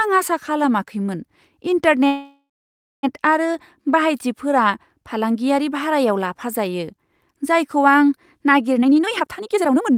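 At 2.07 s the speech stops and the last sound carries on as a fading buzz, then about 0.57 s of silence, before resuming at 3.05 s where it left off. This call audio freeze is likely delayed packets emptying the jitter buffer, adding roughly 0.96 s of delay.

From 8.78 s to 9.91 s a jitter buffer speed-up plays the speech at 176% speed with unchanged pitch, so it sounds hurried. The receiver cut many short pitch-period pieces, around a second of audio in total, to drain the excess buffered delay.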